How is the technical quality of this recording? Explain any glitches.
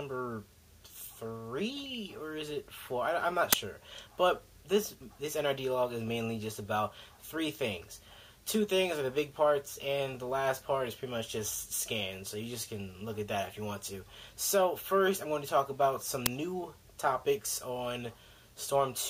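The recording has two kinds of glitch, each occurring twice: DAB burbling near the start and end, and two uninitialised-buffer cracks in the middle.

DAB burbling occurs from 1.77 to 1.95 s and again from 18.59 to 18.70 s. Weak digital radio reception let bit errors slip past error correction into the MP2 audio data, at a rate that points to a little over a tenth of a percent in the first patch and around a third of a percent in the second. Corrupted samples produce short noise blips in individual sub-bands, and any damaged scale factors make sub-bands jump in level for up to a frame, giving a bubbly, watery disturbance.

The uninitialised buffer faults occur at 3.53 s and 16.26 s. In each case a block was played out before any audio had been written into it, so whatever values were already in memory went out as samples. The first block lasts 10 ms and the second 5 ms. Because both blocks are so short, the stray data is heard as a sudden crack rather than a sustained burst of noise.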